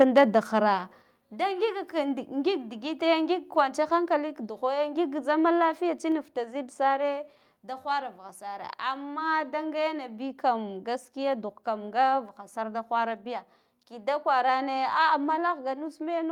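From 0.00 to 0.24 s the input gain was likely set too high, causing microphone overload: peaks run about 4 dB past the converter's limit, flattening their tops into a harsh crackle. The microphone volume was then likely stepped down at 0.02, 1.02, 6.12 (just before "futa zidsare") and 15.3 s, dropping the level abruptly by about 4, 5, 2 and 2 dB.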